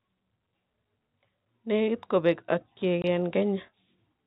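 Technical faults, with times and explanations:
3.02 s: packet loss filled with silence. Just after "kopeeg akyeg" the speech drops out for 20 ms, which fits one lost packet. Silence replaces it, with hard edges.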